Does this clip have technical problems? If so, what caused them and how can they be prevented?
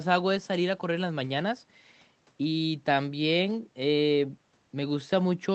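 No, the signal shows no technical faults at any point, so nothing here calls for a cause or a preventive measure.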